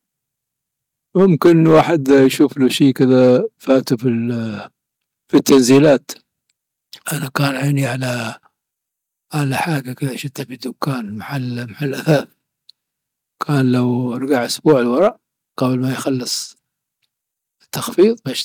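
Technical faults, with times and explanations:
1.19–3.93 s, 5.35–5.94 s, 14.32–15.07 s (after "كان لو", before "قبل ما يخلص") and 18.00–18.05 s: hard clipping. Speech peaks exceed a stage's limit by about 7, 8, 5 and 3 dB and are sliced flat, which adds harsh crackle and fuzz. On the waveform the peaks have squared-off tops, and the spectrogram shows harmonic energy smeared far up the spectrum.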